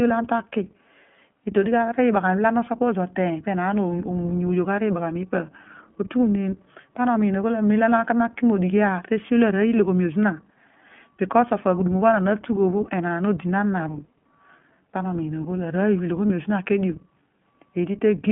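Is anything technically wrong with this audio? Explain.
Yes. The whole clip has a thin, band-limited telephone sound, slightly rough and synthetic, with clearly audible coding damage. This is the iLBC codec: a narrowband speech coder whose 20 ms frames are each coded on their own, with nothing passing above roughly 3.4 kHz, at 15.2 kbps.

At 16.28 s there is a brief held, faintly buzzy smear lasting 20 ms. This is a lost iLBC frame: the decoder filled the single missing frame by repeating the last pitch cycle mixed with noise, and because iLBC frames stand alone the voice recovers immediately afterwards.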